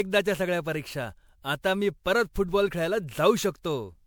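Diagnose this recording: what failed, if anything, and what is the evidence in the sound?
Generation loss runs through the whole speech clip, a fault at the codec stage. The speech has a swirly, hollow quality with smeared consonant attacks, worse than one pass at this bandwidth would give, since content still reaches about 20.7 kHz. That fits MP3 at 128 kbit/s. The likely cause is repeated decoding and re-encoding, about seven times, each pass quantising on a shifted frame grid so noise and spectral holes accumulate.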